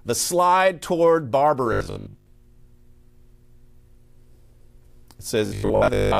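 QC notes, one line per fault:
1.73–2.27 s (after "the slide toward") and 5.46 s to end: robotic sound from repeated short buffers. A rigid metallic 50 Hz buzz replaces most of the real audio, likely from 20 ms chunks being replayed. The spectrogram shows evenly spaced 50 Hz harmonic lines, and the waveform shows identical repeating 20 ms cycles.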